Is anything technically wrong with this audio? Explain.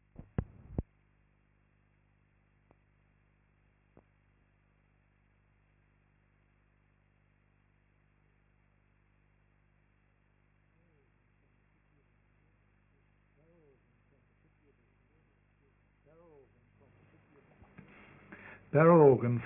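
Yes. Aliasing runs through the whole clip: the upper range sounds gritty and metallic, with stray tones folding back below about 3 kHz at roughly 30 dB under the signal. That fold point fits downsampling to a 6 kHz rate without an anti-aliasing filter.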